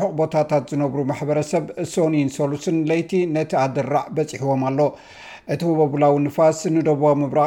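Nothing in this one goes wrong: there are no dropouts, glitches or other technical faults to point to anywhere in the audio.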